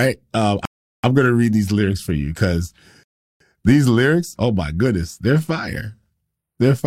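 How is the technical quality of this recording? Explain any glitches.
The speech is interrupted twice by a rebuffering stall. From 0.65 to 1.04 s, just before "gonna read these lyrics", and from 3.03 to 3.40 s, between "lyrics for you because" and "these lyrics oh my", playback ran dry and paused until more data arrived. It then resumed exactly where it stopped, adding 383 ms and 369 ms of dead air without losing any content. On a waveform each stall is a flat line, and on a spectrogram it is a blank vertical band with clean edges on both sides.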